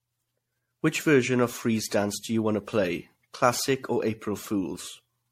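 Throughout, the speech sounds swirly, hollow and smeared, with blurred attacks and nothing above 16.4 kHz. This is generation loss, likely from re-encoding about ten times with a lossy codec that fits 64 kbit/s MP3, each pass adding fresh quantisation damage.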